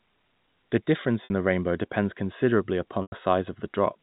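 A brief buzzy hold in the speech from 1.24 to 1.30 s, just before "the rainbow depends considerably", and a longer one from 3.02 to 3.12 s, right after "the rainbow depends considerably", that tails into silence before the speech cross-fades back. Both are packet loss with pitch repetition: 60 ms and 100 ms of audio went missing, which fits three and five 20 ms packets. The receiver looped the last pitch period and faded it out over about 50 ms, so the longer gap empties out. The band-limited G.711 telephone coding can be heard throughout.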